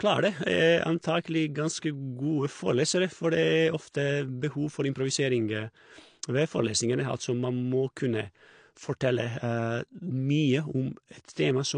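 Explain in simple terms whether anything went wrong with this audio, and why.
Something did go wrong, and it runs through the whole clip, start to finish. The speech sounds dull and a bit smeared, with a warbly, fizzy edge on the hissy sounds. Nothing comes through above roughly 9.8 kHz, so the crisp top end is simply gone. That's the signature of AAC compression, most likely squeezed too hard: the encoder throws away detail it thinks you won't miss, and here you can plainly hear what it dropped.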